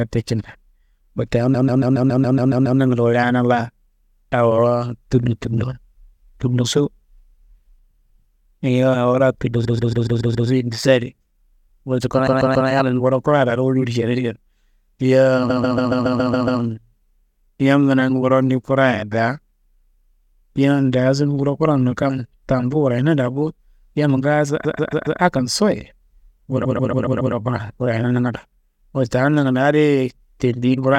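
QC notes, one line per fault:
1.53–2.79, 9.64–10.47, 12.26–12.68, 15.49–16.60, 24.64–25.20 (just after "daa bo yamma ngaaso"), 26.64–27.33 s (just before "kuran wurayena nangando"): repeated frames. A stutter loops the same 139.3 ms slice 3 to 9 extra times. A run of six compressed frames, consistent with frames of about 23 ms, was decoded again and again. This lengthens the audio by 0.42 to 1.25 s at each point.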